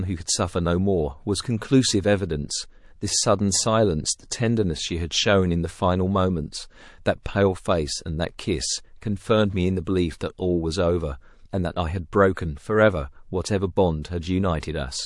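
MP3 compression runs through the whole speech clip, and the damage is plainly audible. The sound has a watery, swirling texture, with the treble thinned out and sibilants turning metallic. This is likely the result of an encoder that was short of bits, which fits a low bitrate around 48 kbps. With too few bits, it discards the upper frequencies and lets weak spectral lines drop in and out from one frame to the next.

Pre-echo occurs at 7.23, 9.84, 10.18, 12.34, 14.02 and 14.61 s. Before each sharp onset there is a brief wash of hiss lasting roughly 22 to 32 ms and rising about 10 to 19 dB above the quiet just before it. The encoder spread its quantisation noise across a long transform block, about 48 ms here, so noise sized for the attack leaks backwards into the silence. The behaviour points to an encoder that never switched to short blocks, which leaves the attacks sounding blunted and smeared.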